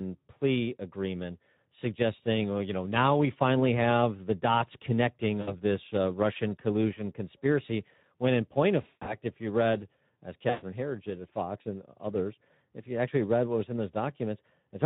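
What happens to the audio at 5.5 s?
Between 5.41 and 5.55 s there is VoIP packet loss concealed by the speech codec. A gap of about 60 ms, consistent with three 20 ms frames, is filled by the decoder repeating its last pitch and filter at falling gain. The result is a fading smear, and the sound stays weak briefly after the packets resume.

Underneath and throughout, the Speex codec damage is plainly audible. It is consistent with a setting around 11 kbps, where the CELP excitation is starved of bits. That gives the sound a noisy, hoarse texture.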